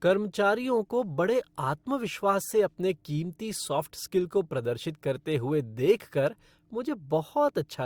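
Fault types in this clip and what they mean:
No fault types are present in this clip, so there is nothing to explain.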